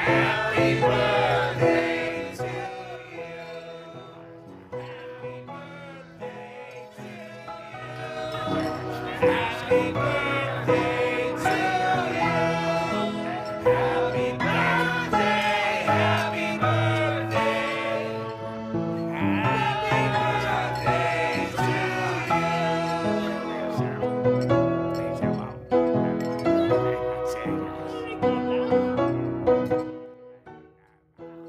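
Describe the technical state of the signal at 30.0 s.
At 30.0 s there is zipper noise, from 29.63 to 30.16 s. The level falls by roughly 20 dB in unsmoothed 3 dB steps, about 15 a second. Each step leaves a small click, so a rapid ticking rides on the sound.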